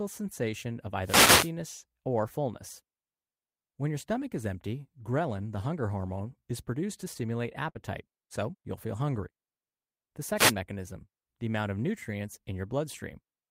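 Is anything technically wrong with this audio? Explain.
Yes, the speech has three faults of two kinds.

Wireless microphone noise hits occur from 1.03 to 1.51 s, between "sensation of" and "or fullness", and from 10.36 to 10.53 s, just before "mechanism the amount of". The analogue FM radio link fades when reflected paths cancel the direct signal, so receiver noise rises over the speech. Each event is a swish of static. The first lasts about half a second and the second under 0.2 s.

A burst of packet loss occurs at 7.69 to 7.78 s, after "is produced to stimulate" and before "so you'll feel hungry". Packets went missing or arrived too late to play. The receiver extended the last sound for about 55 ms while fading it, producing a brief held buzz or hiss. Playback then resumes, but roughly 60 ms of speech is gone, so the phrase jumps slightly.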